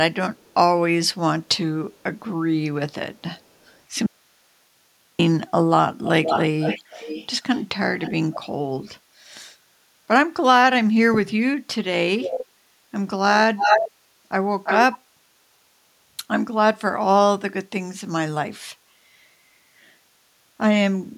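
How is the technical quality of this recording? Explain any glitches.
The recording has two kinds of glitch: repeated echo leaks and one dropout.

Echo leak occurs at 0.36, 1.99, 3.38, 6.04, 8.02, 12.18, 13.57 and 14.63 s. The far end likely plays the call on a loudspeaker, and its echo canceller fails to remove everything its microphone picks up. A delayed copy of the speech comes back about 364 ms late in the first three, very faint. Around 473 ms late at 6.04 and 8.02 s, it is strong at 6.04 s and weaker at 8.02 s, and the 6.04 s one lasts 1.6 s. About 345 ms late in the last three, it is loud, nearly matching the speech at 13.57 s.

Audio dropout to a faint residue runs from 4.06 to 5.19 s. The wanted signal is likely lost while the path after the break stays live. For 1.13 s the speech cuts out abruptly, leaving only hiss about 45 dB below the signal, then snaps back in mid-flow.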